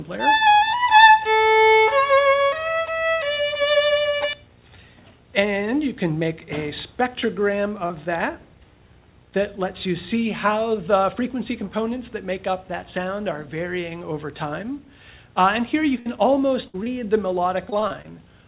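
At 7.20 to 7.24 s and 7.86 to 7.92 s, short concealed packet loss leaves 20 ms and 40 ms holes. The receiver extends the preceding sound, heard as brief smears or wobbles. At 16.00 to 16.08 s and 16.68 to 16.76 s, a burst of packet loss drops about 60 ms each time, and the bridged sound fades as a held buzz or hiss before the audio resumes further on. Another 20 ms short concealed loss follows at 16.84 to 16.88 s. From 17.70 to 18.06 s, repeated packet loss punches four gaps, each up to 21 ms and together about a fifth of the span, producing choppy, robotic sound. All of this sits on a narrowband call path with nothing above 4 kHz, which fits G.711 mu-law.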